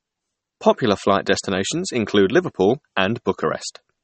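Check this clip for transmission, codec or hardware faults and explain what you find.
One fault runs through the whole clip: likely MP3 compression, fitting a low bitrate around 32 kbps. Nothing is heard above 8.4 kHz. Short of bits, the encoder cuts the treble and drops weak frequency lines frame by frame. The speech sounds dull and watery, with plainly audible damage.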